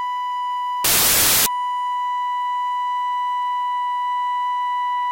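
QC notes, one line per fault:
0.84–1.46 s, samples built from the wrong bytes: the music suddenly turns into loud, harsh broadband noise for about 0.6 s. The bytes of each sample got stitched together wrongly, so the jittery low bits ended up as the big part of every value.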